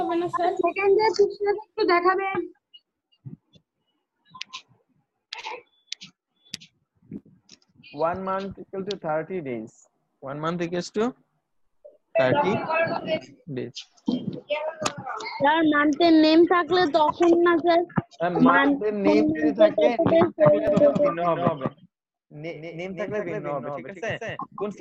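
From about 20.67 s to the end, there's a doubled audio track: a second, full-band copy trailing roughly a fifth of a second behind, a few dB quieter, with no room colour, switching on abruptly. Likely a second capture path running late.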